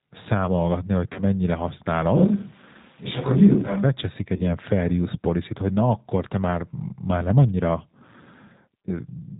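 Throughout, the speech sounds slightly rough and synthetic, with nothing above 4 kHz, which fits the G.729 codec at 8 kbit/s rebuilding the voice from a simple filter-and-pulse model. At 1.13–1.22 s and again at 4.36–4.43 s, the voice smears into a brief, fading stretched sound and stays weak or distorted afterwards. This is VoIP packet loss concealed by the speech codec: about 30 ms of audio, consistent with one lost packet, was extrapolated from the preceding sound.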